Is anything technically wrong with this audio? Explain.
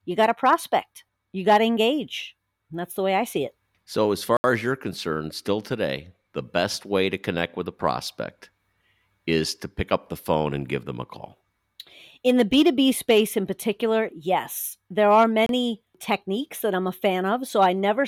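Yes. There are two blocks of digital silence, at 4.37 to 4.44 s (72 ms, just before "as you're concerned still") and at 15.46 to 15.49 s (29 ms, between "particular yes there are" and "techniques that I'm a"). In each, samples were zeroed, probably because the output buffer wasn't filled in time. The speech drops abruptly to nothing, heard as a short hole. On a waveform this shows as a flat line, and on a spectrogram as a blank vertical gap edged by broadband streaks.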